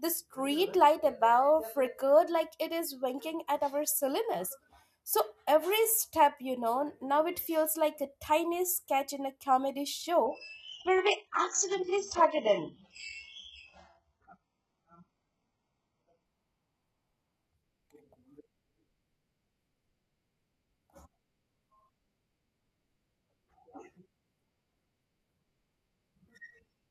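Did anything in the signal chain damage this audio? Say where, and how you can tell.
Yes. Just after "sketch in a comedy", at 10.25 s, the speech abruptly turns dull, with nothing above about 7.9 kHz and a swirly, smeared upper range, then snaps back at 16.25 s with no gap either time. That is an adaptive stream at a lower bitrate. The network connection slowed, so the player switched mid-stream to a far leaner encoding, which fits a drop from ordinary AAC to a very low-rate HE-AAC that rebuilds its treble synthetically.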